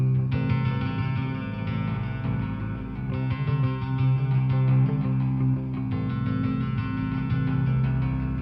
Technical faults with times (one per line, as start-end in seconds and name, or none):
none